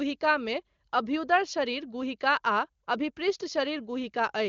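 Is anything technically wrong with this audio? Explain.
No, nothing stood out on listening to this speech clip.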